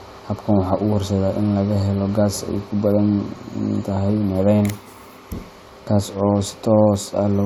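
Speech, with no technical fault to be heard anywhere in it. There is nothing here to place in time or to trace to a cause.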